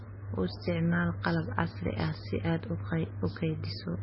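Throughout, nothing sounds above 5.6 kHz and the speech turns watery and swirly, likely heavy MP3 compression; that warble sets it apart from low-pass filtering.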